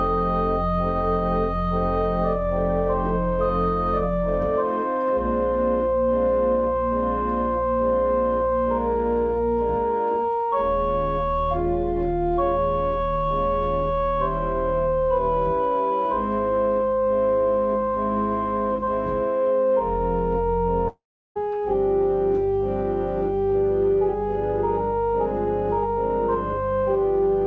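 From 20.88 to 21.37 s the sound stretches into a fading buzz, falls silent for about a third of a second, then resumes with roughly half a second skipped rather than delayed. This is likely a long network dropout, not a brief packet-loss glitch. The G.722 call path carries nothing above 8 kHz throughout.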